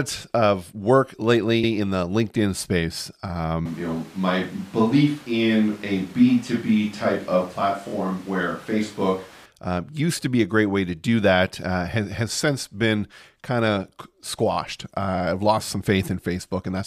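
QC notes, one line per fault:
1.63–1.72 s, 7.87–7.92 s, 14.51–14.56 s, repeated frames: the first repeat falls between "of work" and "in the". There a 93 ms block replays once, and at the later two a 23 ms block replays twice, stuttering. The spectrogram shows identical slices side by side.
3.66–9.46 s, switch to a distant microphone: up to "uh used to be", the sound turns hollow and roomy at much the same level, with room noise about 25 dB below, likely from the close microphone dropping out. The spectrogram shows a thinner low end, a raised noise floor, smeared tails and abrupt edges.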